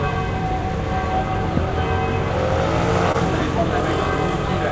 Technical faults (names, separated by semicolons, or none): loud pop; short concealed packet loss